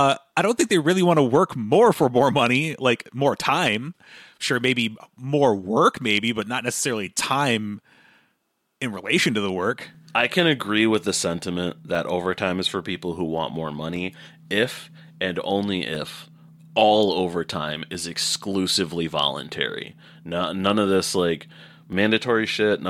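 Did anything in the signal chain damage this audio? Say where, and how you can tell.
Yes: periodic USB or driver dropouts from 1.95 s, after "want to work more", to 21.93 s. Every 2.0 s the driver stalls, leaving a few milliseconds of silence heard as a tick.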